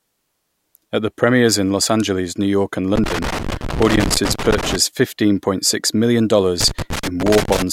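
Speech with loose connector crackle from 2.96 to 4.76 s, before "fifteen point six million", and from 6.61 to 7.62 s. A worn contact is chopping the signal into irregular scratchy bursts.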